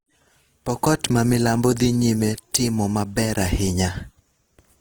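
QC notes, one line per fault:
Throughout, Opus compression: the speech has a rough, grainy texture, with plainly audible damage. The top end still reaches all the way out to about 20.2 kHz, so nothing sounds muffled; instead the detail gets smeared into noise. That's likely the music-oriented CELT mode running short on bits. It keeps each band's energy but fills in the fine structure with folded or noisy content, which fits a rate around 16 kbps.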